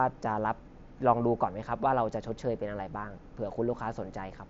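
Nothing goes wrong in this one: the speech comes over a Bluetooth headset link using the mSBC codec, so the sound tops out around 7.7 kHz with just the light graininess that codec normally brings.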